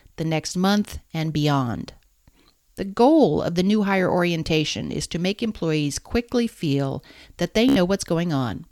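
At 7.69 s, just after "quickly feel that they", a Bluetooth stutter hits. Packets arrived late or not at all. The receiver replayed its last short slice, giving a brief machine-gun buzz until 7.76 s. About 73 ms is lost, which fits a handful of packets. The speech then resumes further on.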